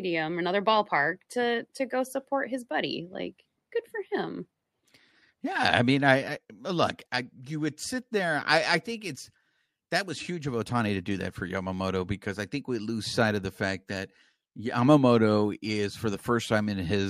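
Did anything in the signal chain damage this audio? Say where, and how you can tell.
No, nothing in the signal chain damaged this audio.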